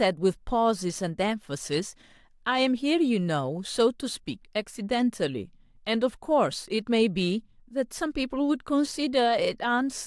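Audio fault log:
No audible faults detected.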